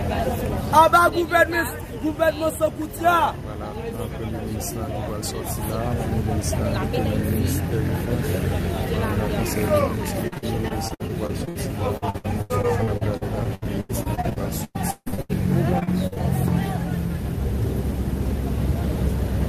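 Timecode bleed runs through the whole clip. Linear timecode at 25 frames per second has leaked into the audio. It sits roughly 30 dB below the sound, as a steady warbling chirp flipping between tones near 1 kHz and 2 kHz.

Repeated packet loss (robotic sound) strikes from 10.27 to 11.57 s, 11.97 to 15.31 s and 15.79 to 16.18 s. Packets kept going missing. Each hole was patched by stretching the last sound, so about a quarter to a third of each stretch is filler. The longest hole is 155 ms. The audio turns choppy, with pieces missing.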